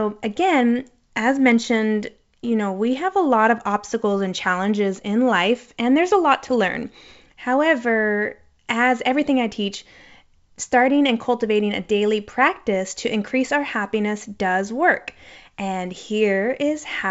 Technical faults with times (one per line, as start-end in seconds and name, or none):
none